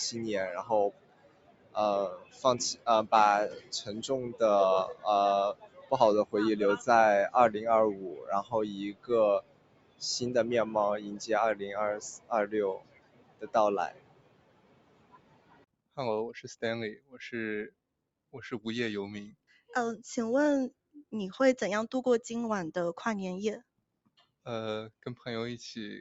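From start to finish, a noise suppressor built for speech is acting on this sound. It treats steady tones, ambience and decaying tails as noise and pulls them down. Sharp onsets slip through, but held parts sink, with level swings of around 20 dB. The result pumps and thins, and the top end, which stops near 8 kHz on the call path, does nothing to hide it.

The sound is cut by the noise suppressor in eight stretches: 0.6 to 2.87 s, 3.49 to 6.88 s, 7.55 to 10.02 s, 12.13 to 15.98 s, 16.95 to 18.34 s, 19.3 to 19.71 s, 20.71 to 21.13 s, and 23.6 to 25.06 s. In each, sustained or fading material drops by up to about 19 dB. Tails are chopped short. The longest damage sits at 12.13 to 15.98 s, where around three seconds sag.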